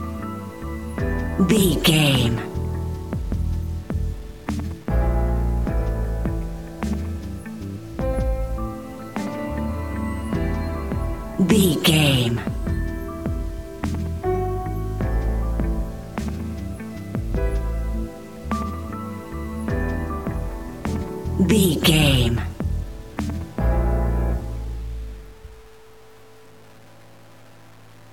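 Low bit depth without dither runs through the whole audio, likely from truncation to about 8 bits: quiet passages turn gritty, with distortion tracking the sound roughly 30 dB below it. A zoomed waveform shows visible stair-steps, and the spectrogram shows signal-shaped hash rather than a flat noise floor.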